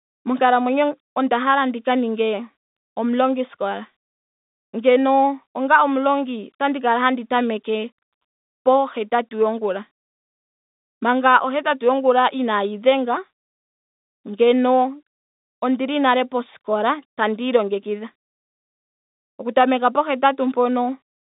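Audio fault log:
No faults heard anywhere in this recording.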